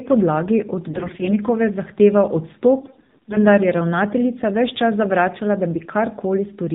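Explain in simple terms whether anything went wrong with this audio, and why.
Yes, two things are audible. The whole recording has passed through the AMR narrowband mobile codec, the old phone-network speech coder. It drops everything above 4 kHz and rebuilds the voice from a simple model, so the speech sounds muffled, buzzy and synthetic throughout.

AMR bit errors also damage two stretches, from 0.88 to 1.33 s and from 2.80 to 3.39 s. Some of the less protected data was corrupted on the way, so the decoder rebuilt the voice wrongly. Pitch and loudness roughly hold, but the voice turns hoarse, scratchy and gargly, and the second stretch is worse.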